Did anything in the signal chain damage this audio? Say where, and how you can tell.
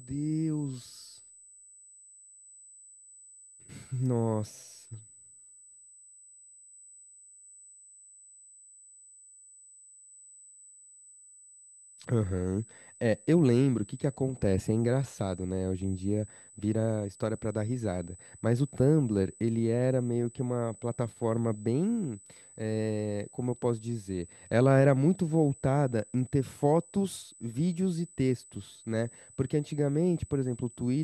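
Yes. USB whine runs throughout the speech as a steady, fixed-pitch tone at 8 kHz, roughly 25 dB below the voice. It enters at the analogue wiring: current drawn in 125-microsecond USB microframes leaks through shared power or ground into the signal.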